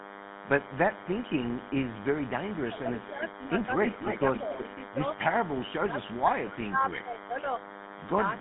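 Speech sits under a steady, thin 100 Hz buzz with many harmonics, about 15 dB below the voice, from a nearby DECT cordless phone whose 10 ms radio bursts are rectified into the audio. Throughout, the voice has a buzzy, gravelly roughness and nothing above 3.8 kHz, the plainly audible mark of the GSM full-rate codec, which fits its 13 kbps pulse-excited coding. From 1.55 to 5.59 s a delayed copy of the voice trails it by 268 ms, nearly as loud as the speech itself. It returns faintly from 6.9 s to the end. This is likely an echo leak, where a far-end loudspeaker's echo slipped past the echo canceller. Between 2.65 and 3.25 s the voice dips deeply, by about 15 dB over roughly half a second, and between 4.0 and 4.98 s it sags slightly and briefly. Both are likely speech suppressed in double talk, with the canceller turning the talker down while both sides spoke at once.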